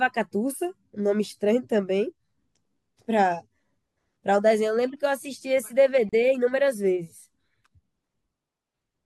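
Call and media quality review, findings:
Gap at a join of encoded pieces, 6.09–6.13 s. 35 ms silence cuts the speech, then resumes. Separately encoded segments joined untrimmed; encoder delay and last-frame padding retained.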